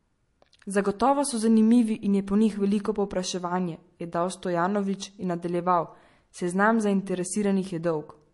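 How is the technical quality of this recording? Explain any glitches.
The quality is compromised by one fault that runs the whole length of the speech: plainly audible MP3 compression.

Throughout, nothing is heard above about 11.3 kHz, and the speech has a watery, swirling texture with smeared consonant attacks and metallic chirps on s sounds. This likely comes from MP3 encoding at a low bitrate, which fits roughly 48 kbps. Short of bits, the encoder cuts the treble at a fixed point and drops weak frequency lines that flicker on and off between frames. That flickering sets it apart from a plain low-pass filter, which would dull the sound without any swirl.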